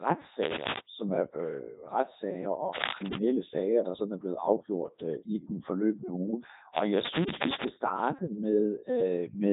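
Codec 2 vocoder damage runs through the whole clip. Instead of the waveform, only pitch, voicing, energy and a spectral envelope are sent and rebuilt from sine waves, so the speech sounds robotic and buzzy, heavily degraded, with nothing above 3.8 kHz, which fits the 3.2 kbit/s mode.

Cable scratch noise appears from 2.72 to 3.2 s, just before "sager der sådan er". Dense, uneven bursts of scratching rise a few decibels above the speech, likely from a worn cable or connector being moved so its contact resistance changed rapidly.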